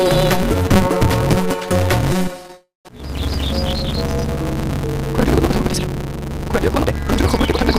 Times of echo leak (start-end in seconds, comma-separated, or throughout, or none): none